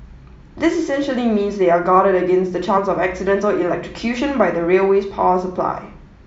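At 2.77 s the speech breaks with a brief glitch. This is damaged data in a compressed stream: corrupted bytes made the decoder lose sync.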